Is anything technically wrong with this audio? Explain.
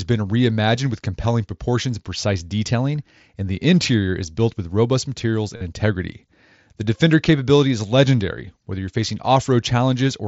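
Yes. There is concealed Bluetooth headset packet loss at 3.60 s, between "precise detailing and the" and "interior is built with", and from 5.56 to 5.61 s, after "built with robust materials." Lost headset packets were filled by repeating recent waveform. The brief first gap lasts 15 ms. The 45 ms second gap buzzes, then warbles as real audio returns.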